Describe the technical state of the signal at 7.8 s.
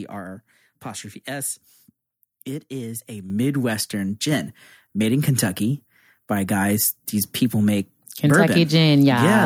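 At 7.8 s the speech signal is intact, with no audible technical fault at that moment.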